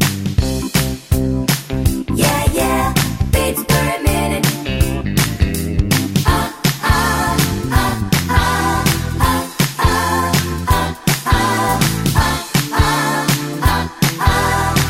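No technical faults can be heard anywhere in the audio.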